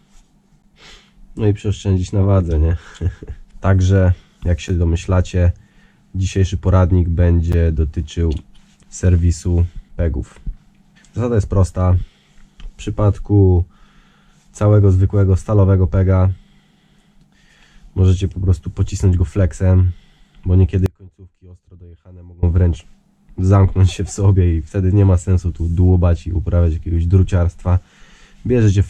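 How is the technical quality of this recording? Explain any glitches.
The recording has two kinds of technical fault: three brief blocks of digital silence early on, and one longer dropout to a faint residue later.

Blocks of digital silence occur at 0.62 s, 4.69 s and 7.52 s. Each lasts about 8 to 11 ms. The sound drops to silence and returns with no fade. Each gap is heard as a tick or dip. The 10.67 ms gaps fit a 512-sample buffer. The output buffer was probably not filled in time, and zeros went out instead.

An audio dropout to a faint residue runs from 20.86 s to 22.43 s, about 1.6 s. The sound cuts out abruptly, mid-flow. It does not fade. Only a faint trace remains, about 25 dB below the normal level. It comes back just as suddenly. The likely cause is a brief loss of the wanted signal upstream, while the path after the break stayed live and let a faint sound through.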